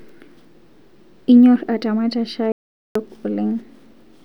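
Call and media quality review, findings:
Audio dropout to silence, 2.52 to 2.95 s, about 435 ms of speech lost. The signal cuts off mid-flow and returns abruptly. The gap is silent, with no room tone or noise floor. Likely cause is input loss upstream: device disconnect, link failure or a stray mute, while the recorder kept writing silence. This differs from packet-loss concealment or a noise gate because nothing is faded, smoothed or filled with comfort noise. It is silence for the full span.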